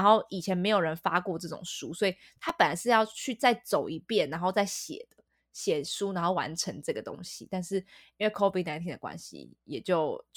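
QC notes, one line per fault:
2.49 s, block of digital silence: the speech drops to silence for about 5 ms and then resumes, with no fade on either side. Because the waveform is cut off abruptly and restored just as abruptly, each edge makes a step discontinuity. At this length the two edges merge into a single sharp tick rather than an audible hole. A gap this brief and clean points to an output buffer that was not filled in time.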